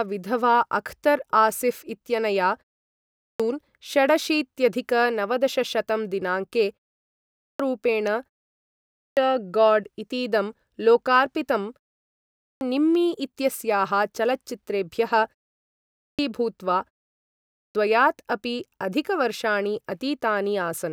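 The output device drops into a low-power state during short pauses of about 0.3 to 0.4 s and needs time to wake, producing clipped starts after a pause at 2.86, 7.07, 8.59, 12.02, 15.64 and 17.17 s. Each time, roughly 0.52 to 0.59 s of speech is swallowed, so words burst abruptly out of the muted silence without their opening sounds.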